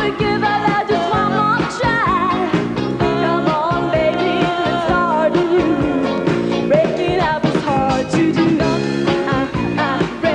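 No technical fault can be heard anywhere in this audio; the signal stays steady and intact throughout.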